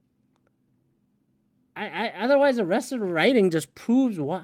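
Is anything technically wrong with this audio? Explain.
Yes. At 0.33 s the speech lurches forward with no gap: roughly 0.4 s of sound is simply missing, its two sides butted together. This is a skip ahead, where a stretch of audio was discarded while later audio was already queued, so playback jumped straight to it.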